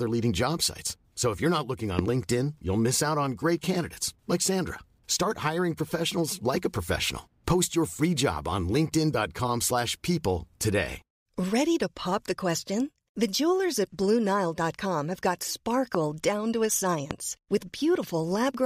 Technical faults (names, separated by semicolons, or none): loud pop